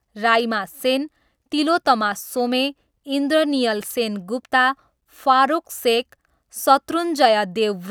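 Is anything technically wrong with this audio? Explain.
Yes. At 1.85 s there is likely a case of audio missing between chunks: the recorder seems to drop a brief slice while closing one block and opening the next, which fits 3-second chunks. Roughly 20 ms vanishes and the two sides butt together, heard as a quick skip in the speech.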